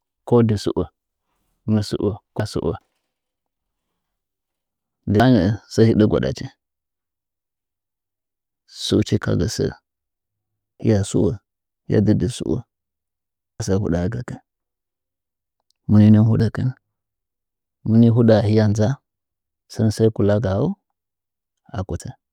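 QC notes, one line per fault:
2.40, 5.20, 10.80, 13.60, 16.40, 22.00 s, audio missing between chunks: speech jumps ahead abruptly, about a fifth of a second gone, first just after "mɨ sɨo", then before "nɚɚ sɚ hɨdɚ gwa". The steady spacing, unlike random dropouts, fits a likely recorder losing audio at each 3-second chunk boundary.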